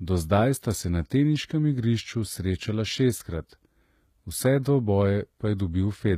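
From start to finish, the speech carries plainly audible codec damage. The likely cause is HE-AAC compression at a low bitrate, and the sound fits something near 20 kbps. Only the lower spectrum is truly coded. The treble is rebuilt by copying lower bands upward under a coarse envelope. The top end reaches higher than plain AAC would at this bitrate but is not the original, and it stops at about 14.9 kHz. S sounds turn gritty and metallic, with a lispy edge.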